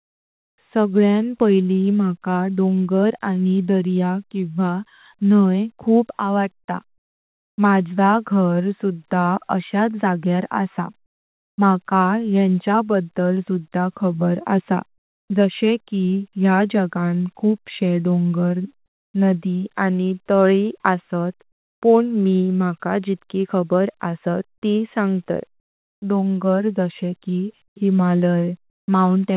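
With the sender's voice detector likely halting transmission during pauses, the receiver inserted comfort noise in place of the background at 6.98–7.58 s (after "न्हाई खूप आवडता"), 14.98–15.3 s (after "बद्दल सुधा खबर असा") and 28.7–28.88 s. The faint background, about 46 dB below the loudest sound, turns flat and featureless, stepping about 2, 4 and 3 dB in level.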